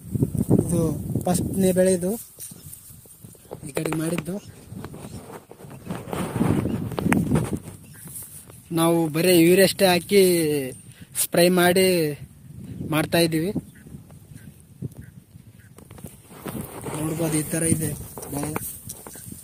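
A call bitrate drop runs from 2.13 to 5.73 s, where the audio turns rough and muffled, at its worst for about 2.5 s. The call's bandwidth estimate fell and the encoder was pushed to code far more coarsely, consistent with a fall from roughly 32 to 18 kbps.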